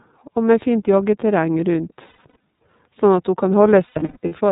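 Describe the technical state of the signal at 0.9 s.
iLBC codec coding runs through the whole clip, including 0.9 s. The speech is band-limited to narrowband, with nothing above 4 kHz, and each frame's excitation is coded independently, in a pattern that fits 30 ms frames at about 13 kbps. The result is plainly audible roughness and a synthetic edge.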